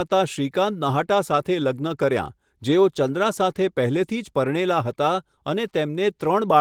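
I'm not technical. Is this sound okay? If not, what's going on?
Yes, nothing here needs fixing; it has been through Opus voice compression, which leaves only light traces and keeps the full range of high frequencies.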